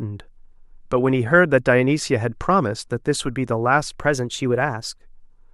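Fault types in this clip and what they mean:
Drift correction step: From 3.99 s to 5.03 s the speech abruptly runs faster and sits higher in pitch, about 95 cents or nearly a semitone sharp, with speed up about 5.7%, before snapping back to normal. Speed and pitch move together, so it sounds like a brief tape speed-up rather than a retune. The likely cause is clock-matching software changing the playback rate in a single step to drain or refill its buffer.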